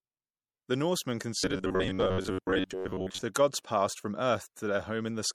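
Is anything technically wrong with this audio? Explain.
Yes, there are two faults. Throughout, the speech shows plainly audible damage that is likely from MP3 compression at a low bitrate, around 64 kbps. Weak frequency lines are dropped, leaving a watery, swirly texture. From 1.39 to 3.22 s, there is robotic sound from repeated short buffers. Roughly 11 ms chunks are likely being repeated in place of most of the real audio, forcing a rigid metallic buzz at 93.8 Hz.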